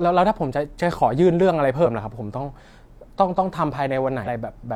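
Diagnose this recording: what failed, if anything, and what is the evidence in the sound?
Damaged data in a compressed stream, at 1.81 to 1.87 s and again at 4.23 to 4.28 s in this speech clip: each event is a brief glitch of roughly 50 ms that cuts across the audio. The fault sits at the codec or storage stage. Corrupted bytes in the encoded file make the decoder misread those frames, lose sync and search for the next valid frame header. The garbled frames come out as the short glitch heard before decoding recovers.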